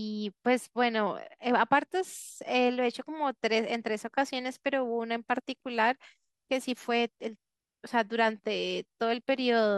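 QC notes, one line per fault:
1.26–2.21 s, Bluetooth SBC bit pool drop: the link's encoder cut its bit budget sharply, roughly halving the bit pool to about 105 kbps, so the highest sub-bands were starved and the rest coarsely quantised. The speech dulls in the treble and turns gritty until the rate recovers.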